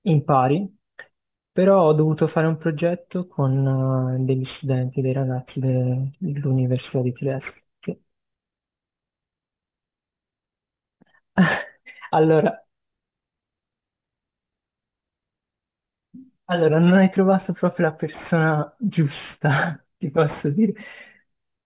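Aliasing runs through the whole thing, start to finish. It sounds like the speech was brought down to a much lower sample rate, probably a drop to 8 kHz, with no anti-alias filter first, so everything above about 4 kHz folded back down into the band as unrelated tones. You hear it mostly on the sibilants, which come out gritty and a bit metallic. The folded junk sits roughly 25 dB below the speech, and the spectrum stays dense right up to the 4 kHz edge.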